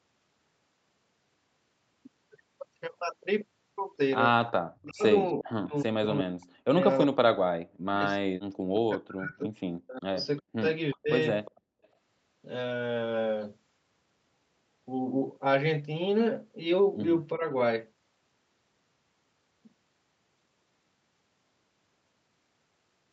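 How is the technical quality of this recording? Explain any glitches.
The recording has call-processing faults: short bursts of returned echo and repeated ducking of the speech. The audio is band-limited with nothing above 8 kHz, which fits a wideband call codec path.

Echo leak, at 4.47–4.52 s, 11.45–11.51 s and 11.83–11.88 s: brief scraps of delayed speech arrive 359 ms behind the original, around 25 dB below it, with the last one fainter at about 40 dB down. This is likely a far-end loudspeaker echo that the echo canceller failed to fully remove.

Speech suppressed in double talk, at 4.53–8.04 s, 8.73–9.51 s, 9.87–11.11 s and 17.37–17.52 s: the speech dips and cuts out in pieces. It drops by roughly 40 dB in the first three spans, for about two seconds in total during the first. The last is a shallow dip of around 10 dB. This is likely the echo canceller attenuating everything while both sides talked at once.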